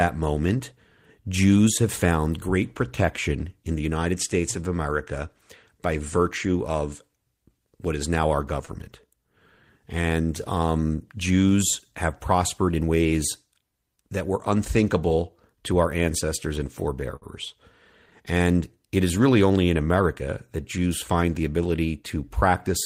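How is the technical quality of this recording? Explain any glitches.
Two brief glitches, both the same kind: a short stall from a late packet. At 8.65–8.70 s, right after "what is now our", and at 17.16–17.24 s, after "to our ancestors and", the jitter buffer ran dry, so the receiver held the last sound for about 30 ms and 57 ms. Nothing's lost, just a sound held too long with a slight buzz or dip.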